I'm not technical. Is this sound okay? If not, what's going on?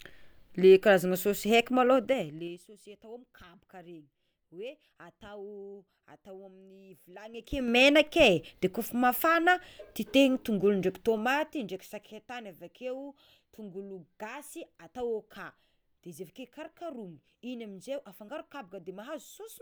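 No. Zipper noise: the volume is changed in coarse jumps, about ten a second, instead of gliding. Each jump clicks, so the speech ticks or zips while it fades down from 1.96 to 2.65 s, rises from 7.25 to 7.77 s, and dips again from 11.01 to 12.20 s.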